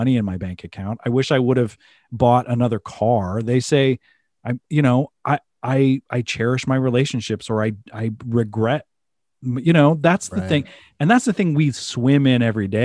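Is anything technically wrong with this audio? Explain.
No, nothing technical is wrong.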